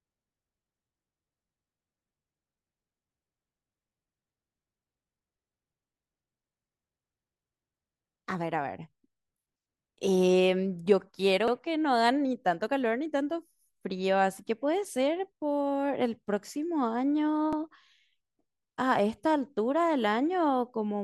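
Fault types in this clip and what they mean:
Overlapping chunks: the speech was handled in 6-second blocks, each starting 50 ms before the last one ended, so that sliver plays twice at every join. It comes through as a brief stutter at 11.48–11.53 s and again at 17.53–17.58 s.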